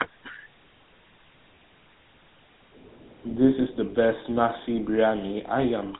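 A speech recording coded throughout with the GSM full-rate codec, giving a buzzy, gravelly roughness and nothing above 3.8 kHz, which fits 13 kbps; plain band-limiting would sound dull, not rasping. From 2.66 to 2.82 s the background is gated by the echo canceller, dipping about 9 dB for roughly 150 ms, a partial duck rather than a dropout's full silence.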